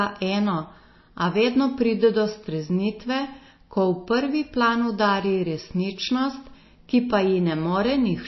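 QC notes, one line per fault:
Throughout: MP3 compression, likely, with plainly audible damage across the speech. Nothing is present above 5.8 kHz, so sibilants lose their top, and the watery, swirling texture points to a low bitrate around 24 kbps, where weak frequency lines drop in and out between frames.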